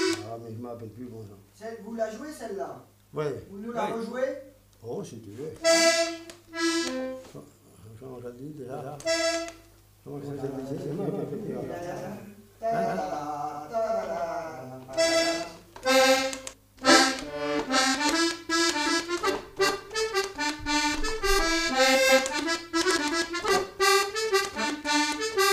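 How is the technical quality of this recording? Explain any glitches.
One glitch stands out. From 8.71 to 16.53 s a doubled audio track appears: a second, equally loud copy trails by about 150 ms, likely from a slower duplicate capture path. Unlike an echo, it has no decay and starts and stops abruptly.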